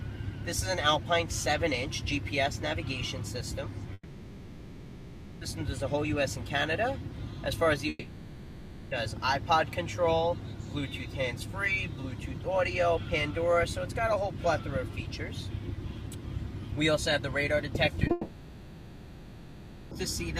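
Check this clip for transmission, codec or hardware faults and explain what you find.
Three long gaps and one brief one interrupt transmission.

Long network dropout, 3.93 to 5.43 s, 7.89 to 8.93 s and 18.11 to 19.93 s: the last sound is stretched into a fading tone or noise, and the audio resumes with material missing. The likely cause is the stream stopping arriving and the receiver filling the hole.

Short concealed packet loss at 18.07 s: a 20 ms smear where the receiver extrapolated the preceding sound over lost data, just before the third dropout.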